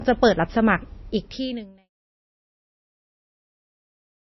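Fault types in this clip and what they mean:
MP3 compression: The speech sounds watery and swirly, with nothing above 5.8 kHz, and the damage is plainly audible; the speech fades out, ending near 1.9 s. The likely cause is an MP3 encoder starved of bits, which fits a bitrate around 26 kbps.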